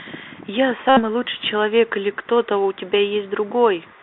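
Bluetooth CVSD headset codec, throughout: the one-bit delta coding, which fits a 64 kbps link, confines the speech to about 300 Hz to 3.7 kHz, adding scratchy sibilants and granular hiss.

Bluetooth headset packet repeated, 0.89 to 1.01 s: lost packets are replaced by the previous packet decoded again, every 3.75 ms, producing a steady buzz near 267 Hz.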